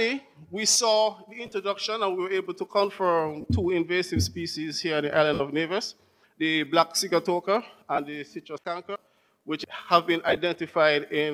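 Lost LE Audio frames at 1.46, 3.41, 5.34, 7.95 and 10.28 s leave gaps of 23 to 60 ms; the first and last are scattered over about 60 and 90 ms. The LC3 decoder fills each gap by reusing the last spectrum with random signs, so the sound briefly smears into noise.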